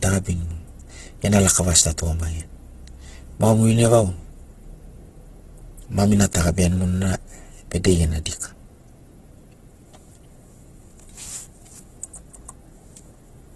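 A speech clip that has likely been through heavy Opus compression throughout, at a rate that fits about 12 kbps in the music-style CELT mode, which fills starved bands with folded or noise-like content, so the sound turns rough and grainy, with nothing above 12.2 kHz.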